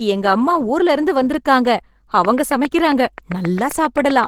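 Opus compression is plainly audible throughout the speech: a muffled, hoarse, grainy texture that points to the encoder's hybrid speech mode at a low rate, around 16 kbps, even though content reaches about 20.2 kHz. It is likely a low-bitrate Opus encode.

From 2.25 s to 4.25 s a train of clicks runs over the speech, about fifteen similar pulses at a regular 7.5 per second, peaking roughly 10 dB above the signal and heard as steady ticking, likely interference injecting repeated pulses.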